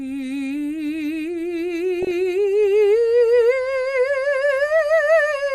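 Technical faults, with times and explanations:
Throughout, MP2 compression: the music sounds dull, with a gurgling, granular texture and upper treble that flickers in and out. This is likely low-rate MPEG Layer II coding, with the character pointing to roughly 80 kbps. The coder divides the spectrum into 32 equal sub-bands and shares out too few bits, so the highest bands drop out entirely and the surviving ones are quantised coarsely enough to be plainly audible.
2.02–2.11 s and 4.68 s, DAB burbling: brief bursts of noise blips and level jumps over the music. The first is a short cluster spanning several frames and the second a single isolated blip. These come from bit errors slipping past error correction into the MP2 data. Corrupted samples put short blips of noise into single sub-bands, and corrupted scale factors, where they get through, make sub-bands jump in level for up to a frame, producing those bursts on top of the programme.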